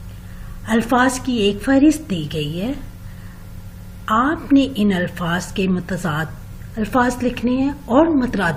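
No faults are audible anywhere in the clip.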